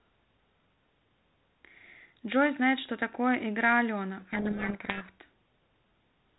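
From 4.2 to 5.09 s a codec payload misread buries the speech in harsh distortion: G.726 code words are decoded in the wrong bit order.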